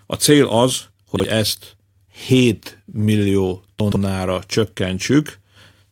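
A brief jumbled stutter in the speech at 1.16 to 1.24 s, and a longer one at 3.80 to 3.96 s: chunks out of order. Sections that fit 40 ms chunks play late, after audio meant to follow them, leaving hard-edged joins.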